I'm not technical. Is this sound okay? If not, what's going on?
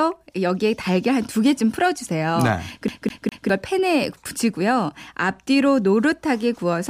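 No. From about 2.88 s to 3.49 s the speech gets caught in a CD stuck on one turn. A short slice of sound, about 0.2 s long, plays three times in a row, with a tiny gap of silence at each jump back, before the recording carries on normally. It's the quick, even stutter of a skipping CD: a scratch knocks the laser back to the same spot on every rotation, so that slice repeats.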